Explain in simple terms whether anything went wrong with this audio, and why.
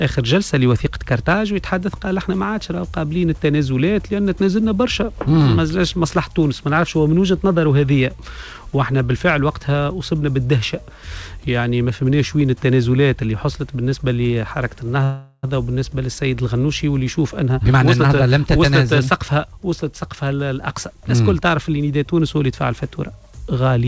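A call audio freeze at 15.04 to 15.45 s shows up as a short buzzy hold that fades. The likely cause is packets stalled in transit, leaving the receiver to stretch the last sound for about 0.4 s. The audio then resumes where it stopped, so nothing is lost.

A jitter buffer speed-up from 17.15 to 19.45 s makes the sound run about 16% fast with no change in pitch. After the stall, too much audio had piled up, so the receiver snipped out many tiny slices, roughly 0.4 s in all, to catch up. This sounds clearly hurried. Throughout, the call codec removes everything above 8 kHz, as expected for this type of call link.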